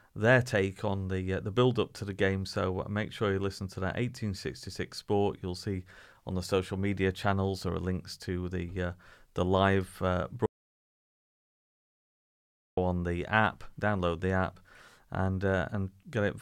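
At 10.46 s, right after "uh the live uh", the speech cuts off abruptly into dead silence, with no room tone or background hiss at all, and returns mid-flow at 12.77 s with "on the app download". Roughly 2.3 s of speech is simply gone. This is an audio dropout to silence: the input was likely lost for that stretch, through a disconnect, failed link or mute, while the recorder kept writing silence.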